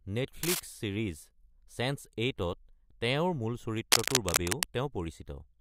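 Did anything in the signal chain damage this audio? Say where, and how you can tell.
Yes: cable scratch noise at 0.43–0.60 s and 3.92–4.63 s, speech-level or louder, shows as ragged broadband spectrogram smears, likely from a worn analogue connector.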